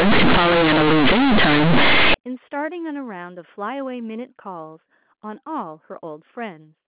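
From the start to 2.14 s, the speech is a harsh, very loud buzz. This is companded audio read as linear. The bytes were coded as mu-law but are played as plain 8-bit samples, with no expansion. Small values near zero now jump across half the output range at every sign change. Quiet passages come out as loud as peaks, and pauses fill with heavy noise. After 2.14 s the G.711 telephone sound takes over, limited to 4 kHz.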